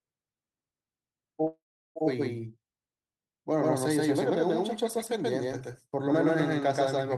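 Throughout the clip every syllable is followed by a second, equally loud, full-band copy roughly 150 ms behind, dry with no room decay, so the speech sounds stuttered and smeared. This doubled audio track likely comes from the same signal being captured twice along paths of different speed.

From 1.47 to 1.98 s the speech stops and the last sound is stretched into a buzz or hiss that fades to about 0.37 s of silence, then resumes where it left off with nothing lost. This call audio freeze likely reflects delayed packets draining the jitter buffer, which added about 0.48 s of delay.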